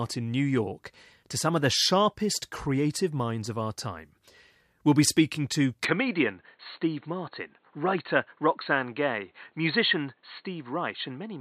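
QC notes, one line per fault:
5.85–11.41 s, input switched to a poorer device: after "be speaking to", the sound abruptly turns dull, with nothing above 4.3 kHz, no gap and a roughly unchanged level. A new background noise about 45 dB down sets it apart from plain filtering. A different microphone likely took over.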